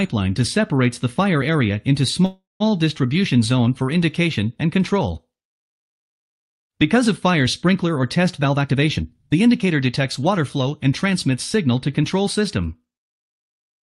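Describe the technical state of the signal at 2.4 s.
At 2.4 s the signal is inside a call audio freeze, running from 2.25 to 2.62 s. The last sound before it is stretched into a buzz or hiss that fades. That fill goes silent for about 170 ms. Then the audio resumes exactly where it stopped, with nothing lost. The whole stall adds about 350 ms of delay. This is likely packets arriving late, so the jitter buffer ran dry and the receiver had to pad the gap.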